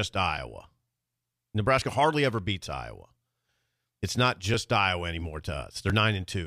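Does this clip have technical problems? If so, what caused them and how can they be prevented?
Yes. Small skips in the speech occur at 0.38, 1.82 (just before "hardly ever beats"), 4.54 and 5.9 s, each losing roughly 5 to 10 ms. These are likely dropped buffers (overrun), where input was overwritten before being read. Unlike an underrun, there is no silent gap, just a jump. Larger input buffers or higher recording-thread priority would prevent it.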